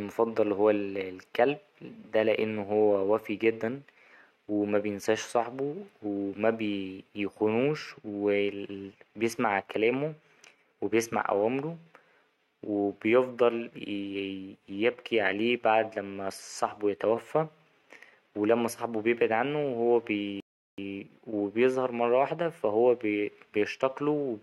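At 20.40 s the speech just cuts out for about 0.38 s, a playback stall, then picks up again at 20.78 s with "ـ وبيظهر مرة واحدة". It's a clean gap in mid-flow, most likely the player running dry of buffered data or its thread getting blocked briefly.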